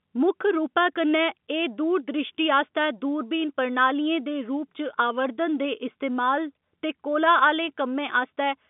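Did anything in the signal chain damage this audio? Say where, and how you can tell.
No, the speech sits in an ordinary telephone band of roughly 150 Hz to 3.6 kHz with nothing above 3.8 kHz, which fits a G.711 mu-law line at 64 kbps, and nothing in the chain has damaged it.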